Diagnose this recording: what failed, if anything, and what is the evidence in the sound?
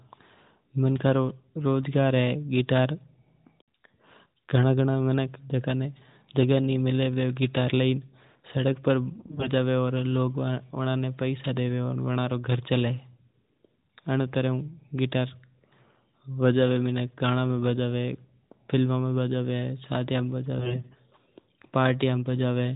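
The radio link corrupted AMR bit errors into the stream. On a weak stretch, roughly a tenth of the less protected bits in each affected frame arrived flipped, yet the checksum on the core bits still passed, so the decoder played them. Excitation pulses landed in the wrong positions and the fine pitch, gain and spectral values drifted. From 9.14 to 9.50 s and again from 20.56 to 20.94 s, the speech turns hoarse, scratchy and gargling while keeping roughly its pitch and loudness. The surrounding audio carries the 4 kHz ceiling of narrowband AMR, which fits its 8 kHz sampling, here in its 12.2 kbps mode.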